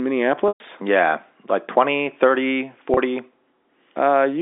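Packet loss with pitch repetition at 0.48–0.60 s (120 ms) and 2.94–2.97 s (30 ms): repeated pitch periods bridge the gaps, giving a held buzz; the longer gap fades to silence.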